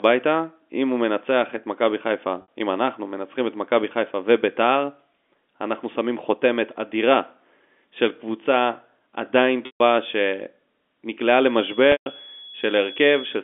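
At 2.42 s the speech holds for an instant on a slightly buzzy, sustained tone before carrying on. This is packet loss with pitch repetition: about 60 ms of audio, consistent with three 20 ms packets, went missing, and the receiver filled the gap by looping the last pitch period. At 9.66 s a longer 140 ms hole first buzzes, then fades toward silence before the speech cross-fades back in.

From 11.42 s to the end, a thin, steady whistle at 3.4 kHz sits about 20 dB under the speech, its level swelling and fading slowly. This feedback whistle is likely a loudspeaker-to-microphone loop held just short of runaway, ringing at a frequency that falls inside the narrow G.711 telephone band. Over that whistle, at 11.92 s, another 140 ms loss produces the same buzzy hold, fade and cross-fade as the one at 9.66 s.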